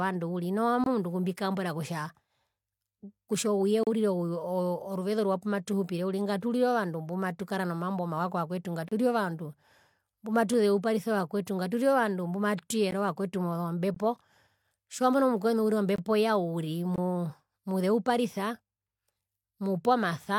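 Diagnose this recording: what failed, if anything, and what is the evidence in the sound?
The stream's segment joins failed, leaving gaps between stream segments: hard-edged silences at 0.84, 3.83 (after "kutja ouye"), 8.88 (after "mbumatukara nomambo mawa kovakwetu"), 12.91, 13.94, 15.96 and 16.96 s, lasting 13 to 35 ms, all on one-second boundaries. On a waveform these appear as flat silent stretches. On a spectrogram they show as blank vertical bands.

There is also a single click at 10.54 s from dropped samples. It is likely caused by a driver or buffer hiccup that lost a fraction of a millisecond. The waveform jumps abruptly between values, and a spectrogram shows one thin broadband vertical line.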